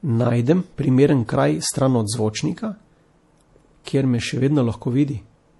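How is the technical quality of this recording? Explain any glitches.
The technical quality is poor, with clear codec damage throughout and one brief smeared attack.

MP3 compression is audible across the whole clip. Nothing is present above 11.5 kHz, so the speech lacks air and its s sounds are dull. The encoder likely ran short of bits, which points to a low bitrate of around 48 kbps. It removed the treble at a fixed cut-off and dropped weak frequency lines. Those lines flicker on and off between frames, giving the sound a watery, swirly texture and metallic edges on sibilants.

Pre-echo occurs from 3.84 to 3.87 s, spreading over about 24 ms. A sharp attack lands late in a coding block. The noise sized for that loud moment is spread across the whole block, including the quiet stretch before the attack. You hear a short burst of hiss just ahead of the onset. The attack itself loses its crispness and sounds soft and smeared.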